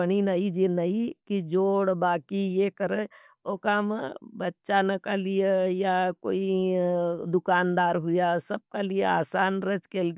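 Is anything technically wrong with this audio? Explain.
No, nothing technically wrong can be heard here.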